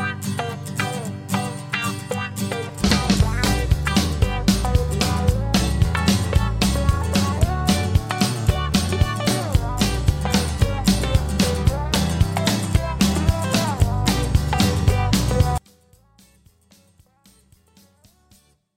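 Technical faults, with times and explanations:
15.58 to 18.76 s, one channel inverted: the sound collapses to a faint remnant about 36 dB below its earlier level and stays there to the end. This is likely because one stereo channel's polarity was flipped, so content common to both sides cancels when summed to mono. On a waveform the mono trace drops to a near-flat sliver; a spectrogram shows energy dropping across the band and only weak residual energy remaining.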